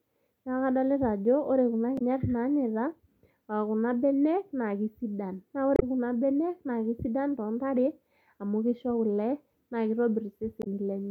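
Damaged data in a compressed stream causes three brief glitches, heard as a chirp, squawk, click or short hole: at 1.95–2.02 s after "ajo ore kuna", at 5.74–5.83 s after "kesidan naa", and at 10.59–10.67 s. Bad bytes garble frames. The decoder loses sync and hunts for the next header.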